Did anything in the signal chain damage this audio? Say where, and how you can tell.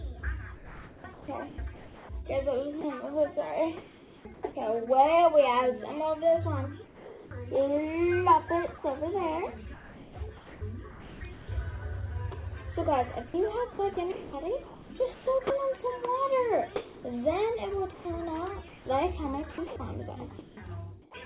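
Yes. The damage comes from call processing at the sending end, specifically its voice detector. From 0.56 to 4.43 s, and again from 13.28 to 21.14 s, the sound turns choppy. Edges and quieter stretches keep giving way to a flat hiss, and the background flickers between real and synthetic. About 1.65 s and 1.77 s are filled that way. The likely cause is sound chopped by the voice detector, which repeatedly toggled transmission off and let the receiver's comfort noise fill the gaps.

Twice the sound simply stops and a steady noise takes its place until it resumes. This happens at 6.86 to 7.31 s, where about 0.17 s of real sound is lost, and at 10.91 to 11.21 s, where about 0.16 s is lost. The steady noise resembles the background but lacks its detail. This is likely sound dropped by the voice detector: quiet material was judged to be background, sending halted, and the receiver played generated noise until the detector retriggered.

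Between 9.74 and 11.48 s the background itself changes character, with about 1.11 s of it becoming an even, featureless noise. That points to comfort noise in place of the background. During discontinuous transmission the sender goes quiet apart from occasional level updates, and the receiver synthesises a rough spectral copy instead of the true ambience. This is likely where the second dropout sits. The call codec's band limit, with nothing above 4 kHz, is consistent with G.711.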